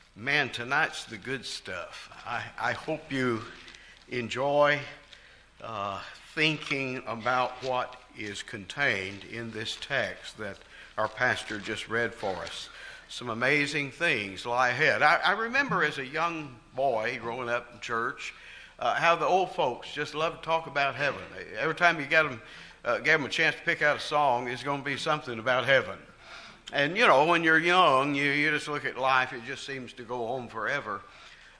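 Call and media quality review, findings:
No faults found: signal path intact, with no audible level, timing or continuity anomalies.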